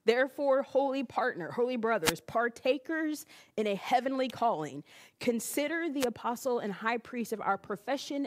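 At 2.03 s and again at 5.99 s, a wireless microphone noise hit cuts through the speech. Each is a brief swish of static, about 0.1 s and 0.06 s long, as the radio signal fades.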